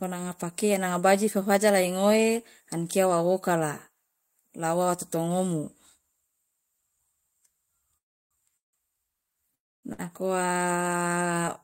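Call audio freezes occur at 7.97 to 8.33 s, 8.57 to 8.75 s and 9.55 to 9.85 s: the sound stops and drops almost at once to silence for about 0.32 s, 0.15 s and 0.26 s, then resumes where it left off, nothing lost. Packets were likely delayed in transit, draining the jitter buffer.

A short stall from a late packet follows at 9.93 to 10.01 s. The buffer was empty when one packet fell due, so the last sound is held an extra 56 ms with a slight buzz or dip before continuing from the same point.

A jitter buffer slow-down runs from 10.53 to 11.23 s. To rebuild its reserve, the receiver repeats single pitch periods, adding about 97 ms, so the speech plays at roughly 87% speed with unchanged pitch, sounding drawn out.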